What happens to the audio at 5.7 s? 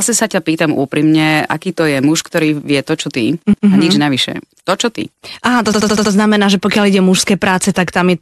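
The speech stutters from 5.72 to 6.12 s. This is a repeated frames fault. A short block of about 78 ms, which fits a run of three compressed frames, was stored or sent more than once. The decoder plays that block five extra times in a row. Each repeat restarts the same sliver of sound, so you hear a rapid stutter. The repeats add about 0.39 s to the audio.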